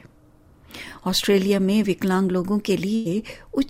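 Audio with a burst of packet loss from 2.95 to 3.07 s. Several consecutive packets arrived too late or never arrived. The receiver stretched the last sound across the gap, fading it over about 97 ms. Playback then resumes with roughly 100 ms missing.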